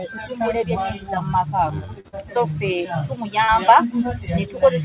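Short concealed packet loss hits at 2.00 to 2.07 s, 2.08 to 2.15 s and 3.44 to 3.51 s. Each time about 40 ms of audio arrived too late, and the receiver filled it by extending the last sound. Each gap is heard as a brief smear or wobble, below the 4 kHz ceiling of the G.711 call path.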